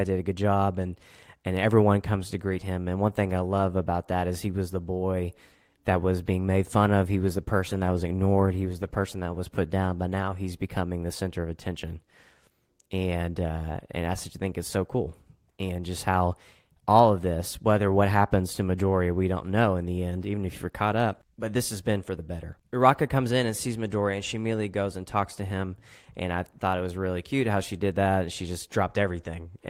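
From 7.12 s to 9.71 s, right after "being made fun of" and ending just before "but now he's becoming", there is a call bitrate drop. The connection's bandwidth estimate fell, so the encoder spent far fewer bits. The sound fits a fall from about 32 kbps to 17 kbps, held at its lowest for roughly two seconds. The speech turns rough and watery. On a spectrogram the harmonics look smeared and patchy for that stretch before the detail returns.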